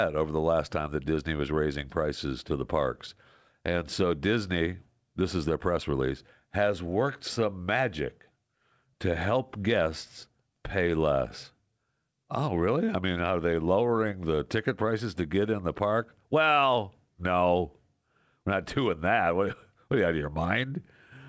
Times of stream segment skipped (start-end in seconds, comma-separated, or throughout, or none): none